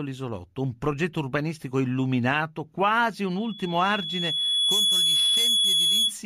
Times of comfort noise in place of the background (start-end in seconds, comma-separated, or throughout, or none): none